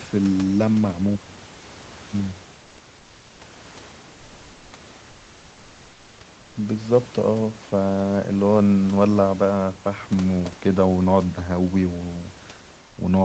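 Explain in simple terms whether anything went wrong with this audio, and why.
In three short pauses, at 2.63 to 2.77 s, 2.99 to 3.39 s and 6.41 to 6.55 s, the room background turns into flat, featureless hiss: comfort noise, likely from the call pausing transmission during silence.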